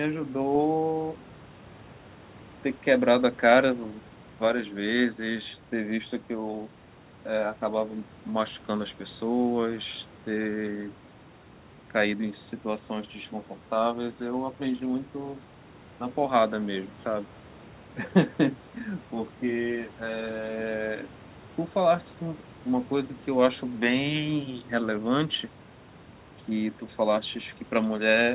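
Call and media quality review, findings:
Nothing to flag here: the speech sits comfortably above a room noise floor about 25 dB down, and the top end stops at 4 kHz, which fits a narrowband call path such as G.711 A-law at 64 kbps.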